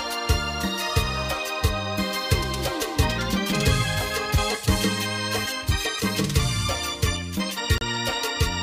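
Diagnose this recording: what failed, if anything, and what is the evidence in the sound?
At playback, a gap between stream segments: a hard-edged silent hole of about 32 ms at 7.78 s, where segment timestamps leave space the player fills with silence.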